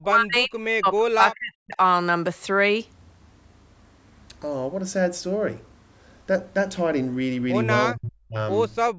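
From 0.0 to 1.79 s, and again from 7.93 to 8.37 s, the speech sinks by roughly 40 dB, most likely speech suppressed in double talk as the echo canceller ducked the near talker along with the far-end echo. The waveform shows the envelope collapsing, and the spectrogram shows the bands fading.

At 8.93 s, through to the end at 8.98 s, the background is gated by the echo canceller, which clamps the microphone down by about 40 dB. The room tone drops out. On the waveform the noise floor flattens to near silence, and on the spectrogram the band-limited energy, capped at 8 kHz by the call processing, goes dark.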